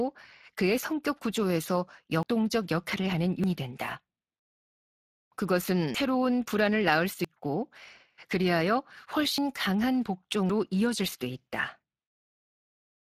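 A speech recording with a noisy, hoarse texture throughout. The top of the spectrum sounds like shaped hiss rather than real detail. That is plainly audible Speex codec damage, which fits a setting of about 22 kbps with too few bits for the excitation. Sudden jumps forward in the sound occur at 2.23, 3.44, 5.94, 7.25, 9.38 and 10.50 s. Each skips roughly a tenth of a second, with longer gaps of around two and three tenths at 3.44 and 5.94 s. The likely cause is a dropped buffer (overrun), where unread audio was overwritten and the remaining pieces were spliced directly together.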